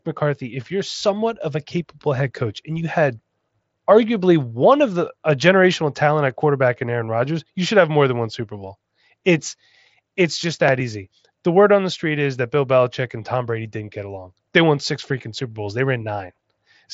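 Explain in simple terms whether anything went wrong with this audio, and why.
Nothing went wrong with this audio: the speech comes through a Bluetooth headset link that is working as it should.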